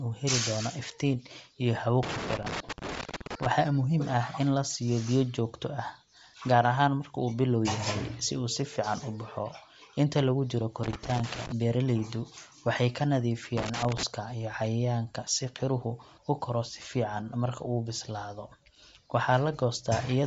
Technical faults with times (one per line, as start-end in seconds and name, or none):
0.00-20.27 Bluetooth LC3 compression
2.03-3.46 loose connector crackle
10.83-11.52 loose connector crackle
13.57-14.03 loose connector crackle